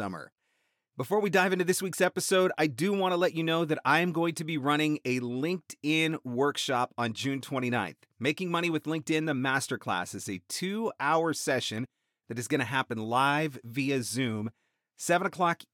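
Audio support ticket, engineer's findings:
Likely dropped samples in the capture or playback stream: a fraction of a millisecond missing, so the waveform jumps to a later value. Heard as a single sharp click in the speech at 6.12 s and again at 11.78 s, no audible gap.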